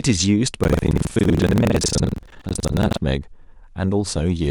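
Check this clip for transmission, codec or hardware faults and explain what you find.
There is one fault, buffer tearing, from 0.60 s to 2.98 s. Across that stretch the speech carries a rough, robotic rattle at about 21.5 Hz. The writing program and the playback hardware have drifted so that they cross inside each buffer period, and the 21.5 Hz rate fits a 2048-sample buffer. In every period, close to two fifths of the audio is stale material from roughly a tenth of a second earlier, with a hard splice at each edge.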